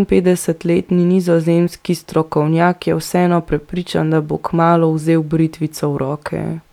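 Nothing in this speech recording stands out as a technical fault, so there's no problem to point to anywhere along the way.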